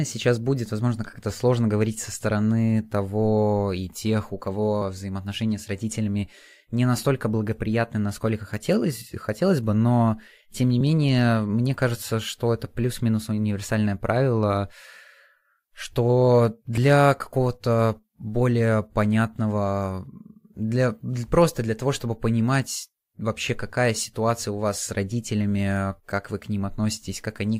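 At 10.81 s, right after "бы но тем не" and just before "мне кажется что это", there's a tiny skip where about 14 ms of speech simply goes missing. That's an overlap between stream segments: two chunks claimed the same stretch of time, so the player trimmed the overlap and the waveform jumps. It happens again at 16.78 s, dropping about 8 ms. The two events are 6 s apart, which fits 6-second segments.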